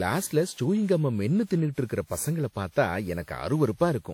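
From start to finish the speech has a swirling, watery smear, with a hollow quality and softened consonant attacks, and nothing is present above 18.9 kHz. This is generation loss, the likely result of the audio being decoded and re-encoded around ten times with a lossy codec. Each pass quantised on a shifted frame grid, so the noise stacked up. The character fits a WMA 1 chain at 96 kbit/s.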